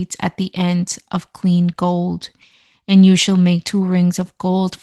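No technical faults are audible in this speech.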